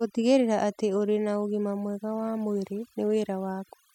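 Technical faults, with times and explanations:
throughout, overdone noise removal: the noise reduction is far too aggressive, cutting hard or removing any band near its noise estimate and taking the softer parts of the speech with it. The background drops and breaks up into twinkling specks.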